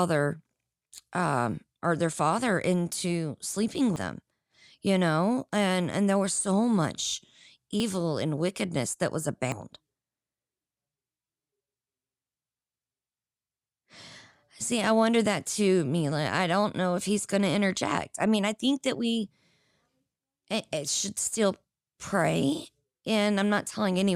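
At 3.96 s, just after "their father into sleeping", the speech jumps forward, losing about a tenth of a second; again at 7.8 s, between "there was so much" and "and wickedness that was", with a shorter skip of around 40 ms; and at 9.52 s, after "and wickedness that was", another loss near 100 ms. Each is likely a dropped buffer (overrun), where audio was overwritten before being read. The waveform shows an abrupt discontinuity with no gap, and the spectrogram a thin vertical broadband line.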